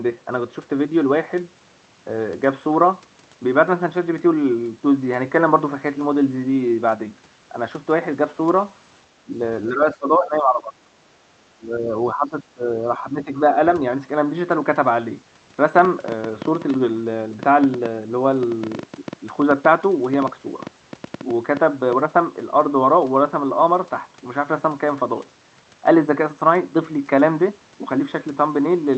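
Between 9.25 and 13.31 s the speech dips repeatedly, at 9.25–9.31, 9.69–10.73, 11.56–11.94, 12.13–12.68 and 12.98–13.31 s, by roughly 10 to 20 dB. This is likely speech suppressed in double talk: the echo canceller mistook near-end speech for echo and attenuated it.

From 15.79 to 21.94 s a train of clicks ticks over the audio, about 40 of them at an irregular average of 6.5 per second and peaking roughly 5 dB above the signal. The similar shape suggests likely interference injecting repeated pulses.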